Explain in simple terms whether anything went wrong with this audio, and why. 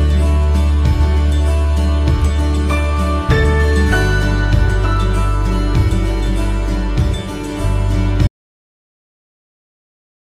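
At 8.27 s the sound cuts off to dead silence and stays that way to the end. This is an audio dropout to silence, likely from a lost input. Unlike a natural pause or fade, even the background hiss vanishes.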